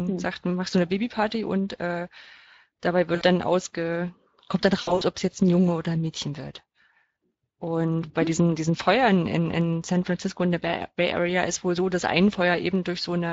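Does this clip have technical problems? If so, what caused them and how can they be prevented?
Yes. Speex codec damage runs through the whole clip. The coder has too few bits to model the speech excitation, so the speech sounds hoarse, grainy and noisy. This points to a bitrate near 20 kbps. A higher Speex quality setting or a more modern codec would prevent it.

VoIP packet loss concealed by the speech codec occurs twice. It happens at 3.15 to 3.25 s, just before "dann ausge kommt dann", and again at 4.81 to 5.03 s, just before "ob es jetzt ein". The decoder stretched its last pitch and filter into a fading buzzy tone or coloured noise. About 60 ms is missing first, then about 140 ms scattered over 200 ms. The distortion lingers briefly afterwards. A larger jitter buffer, forward error correction or a more stable network would prevent it.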